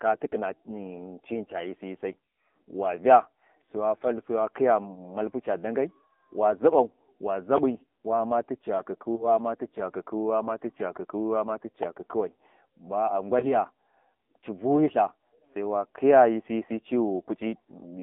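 Throughout, the sound carries the AMR narrowband mobile codec's signature. The band is confined to 200 Hz to 3.5 kHz, and the buzzy, synthetic texture fits a low mode near 7.4 kbps. A spectrogram shows an empty region above 3.5 kHz and smeared, blocky harmonics.

At 9.16 to 9.27 s and again at 13.40 to 13.48 s, lost AMR speech frames cause a brief dip or warble. Each fits a single missing 20 ms frame that the decoder concealed by repeating earlier settings at lower gain. The waveform shows a short amplitude sag, and the spectrogram shows smeared, frozen harmonics.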